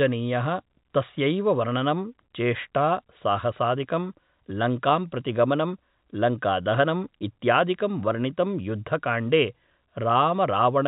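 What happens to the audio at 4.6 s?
Nothing goes wrong at 4.6 s; the speech carries on intact through that moment, with only the narrow telephone-band sound of the G.711 coding that runs throughout.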